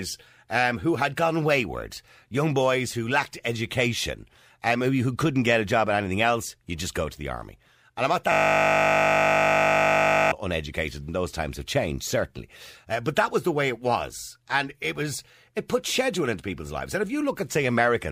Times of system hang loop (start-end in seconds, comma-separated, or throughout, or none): 8.32-10.32